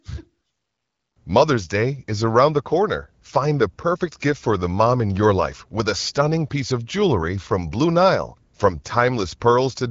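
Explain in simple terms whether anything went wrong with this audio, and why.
Nothing went wrong here: the speech has passed through the AMR wideband (HD Voice) phone codec, which leaves light coding wear and drops all content above 7.5 kHz, exactly as that codec is meant to.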